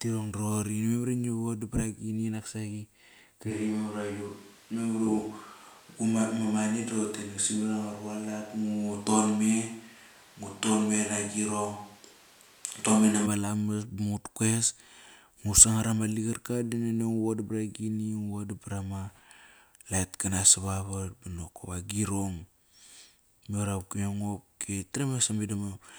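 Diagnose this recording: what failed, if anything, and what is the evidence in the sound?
The capture chain most likely lost the close microphone and fell back to a distant one, a switch to a distant microphone at the input stage. From 3.52 s to 13.25 s the speech turns abruptly roomy and hollow, with thinner bass, then snaps back just as suddenly. Loudness stays roughly the same, but room noise rises to about 30 dB below the speech, because a far pickup captures more reflections and ambience relative to direct sound.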